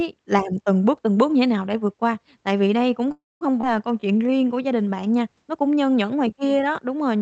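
At 3.11 s the speech stalls in a call audio freeze lasting until 3.43 s. The last sound carries on as a fading buzz or hiss, then about 200 ms of silence. Packets were likely held up and the jitter buffer ran dry. Nothing is lost; speech resumes where it stopped.

At 3.61 s comes a skip ahead. Roughly a tenth of a second of speech is dropped. The join is almost direct, bridged by only about 19 ms. Later audio was already waiting, so playback jumped forward.

From 3.93 to 4.63 s a jitter buffer slow-down stretches the speech. Single pitch periods are repeated to rebuild the reserve, adding 98 ms. Playback runs at 87% speed. Pitch stays the same, but sounds drag.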